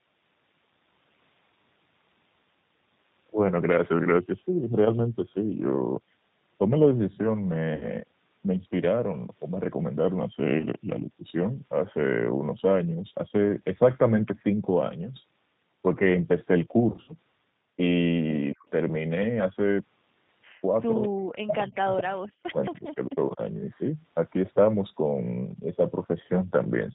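Throughout, the speech carries plainly audible G.729 codec damage: the 8 kbit/s G.729A coder rebuilds each 10 ms frame from a vocal tract filter, pitch predictor and sparse pulses, leaving a slightly rough, synthetic timbre with nothing above 4 kHz.

VoIP packet loss concealed by the speech codec occurs at 7.75–7.88 s (about 60 ms missing), 10.59–10.65 s (20 ms) and 16.92–17.15 s (100 ms scattered across 160 ms, longest gap 60 ms). The decoder extends its last pitch and filter with falling gain, producing brief buzzy, fading stretches and weakened sound just afterwards.

From 18.46 s a faint delayed copy of the speech appears, 222 ms behind the original: briefly at 18.46–18.51 s, then clearer at 21.02–22.02 s and 22.65–22.81 s, and barely audible at 23.7–23.8 s. This is likely echo leak, a loudspeaker echo the far-end canceller failed to remove.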